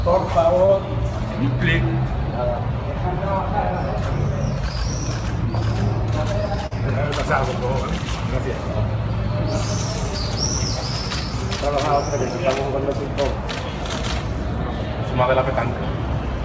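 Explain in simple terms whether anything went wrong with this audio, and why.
Two short pieces of the sound went missing here, a fault called short concealed packet loss. It happens at 0.66 to 0.70 seconds and again at 6.66 to 6.73 seconds. That is 20, then 40 milliseconds that never arrived in time. The receiver filled each gap by continuing the sound just before it. This leaves a brief smear. The sound also came through a call codec, so nothing above 8 kHz is present.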